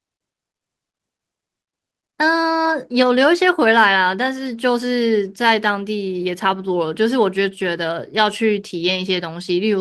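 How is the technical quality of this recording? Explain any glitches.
Two brief glitches in this speech come from lost packets rebuilt from error correction, at 2.65–2.67 s (20 ms) and 8.79–9.01 s (120 ms). The following packets carried low-bitrate copies that the decoder played in place of the missing audio, so nothing goes silent, but those stretches sound rougher and noisier. On a spectrogram they show as short, smeared, grainier patches with no gap in the waveform.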